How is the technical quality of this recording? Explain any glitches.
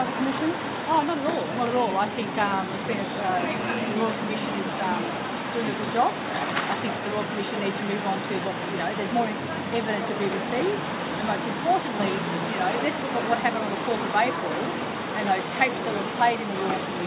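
Nothing stood out as a technical problem on listening, so there are no glitches to explain.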